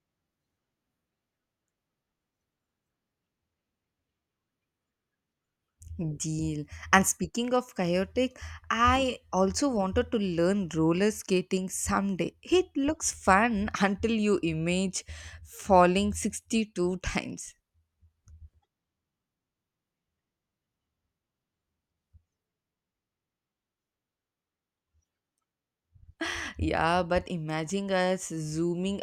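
Speech, with a sudden gain jump from 6.83 to 7.17 s. The level rises by about 4 dB in one step. The background noise rises with it. The likely cause is a digital gain change applied without a ramp, later reversed just as abruptly.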